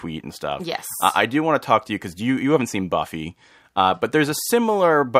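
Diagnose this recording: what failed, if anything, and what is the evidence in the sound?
Nothing in the recording stood out as a fault on careful listening.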